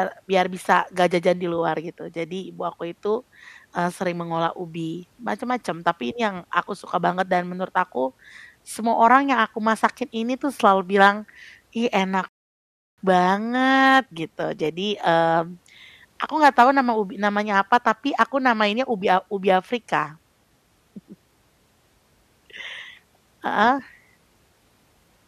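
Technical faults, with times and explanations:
12.29 to 12.98 s, rebuffering stall: the speech drops into silence for about 0.69 s, then carries on from exactly the point where it broke off. The player exhausted its downloaded audio and waited for more, so nothing is skipped, but roughly 0.7 s of dead air is inserted.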